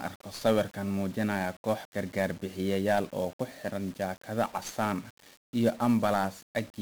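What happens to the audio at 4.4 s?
At 4.4 s the speech carries the 1-bit DFPWM compression present throughout the clip: each sample's single bit nudges an adaptive level up or down, leaving heavy broadband fuzz and crackle with treble buried in hiss, not the warbly, swirling artefacts of a lossy transform codec.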